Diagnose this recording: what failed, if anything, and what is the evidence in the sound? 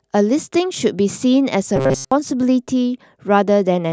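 The speech turns into a robotic sound between 1.76 and 2.12 s. It becomes a rigid, metallic buzz pitched at 133 Hz that still roughly tracks the speech. The failure is at the driver or buffer stage. The likely cause is repeated short buffers. Fresh audio arrived too late, so the software looped the last block instead. A 133 Hz buzz points to a block of about 7.5 ms. Most of that stretch was filled with repeats, and the real audio was skipped.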